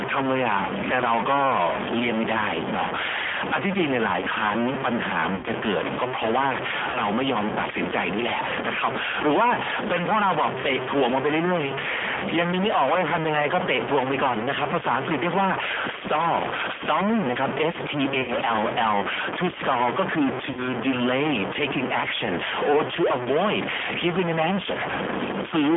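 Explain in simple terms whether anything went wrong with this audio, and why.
A few things went wrong, all at once.

Distortion runs through the whole clip, and even the pauses carry a gritty noise. That pattern is likely a stuck bit: one bit in each sample stays fixed at 0 or 1, so about half the values come out wrong.

The sound is also squeezed into a narrow phone band, roughly 200 Hz to 3.5 kHz, and has a rough, slightly synthetic edge. That's the G.729 codec, a low-rate phone codec that rebuilds speech from a simple model rather than keeping the real waveform.

There are four short dropouts, at 5.35–5.46 s, 6.90–7.01 s, 18.22–18.34 s and 20.51–20.73 s. That's VoIP packet loss concealed by the speech codec. About 40 to 80 ms of audio went missing each time, and the decoder filled the gap by stretching the last sound into a fading buzz or noise.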